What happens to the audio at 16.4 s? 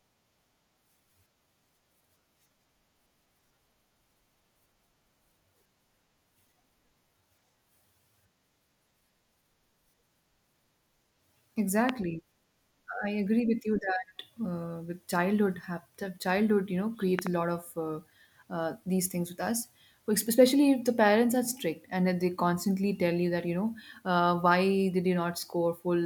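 Nothing goes wrong at 16.4 s; the speech carries on intact through that moment.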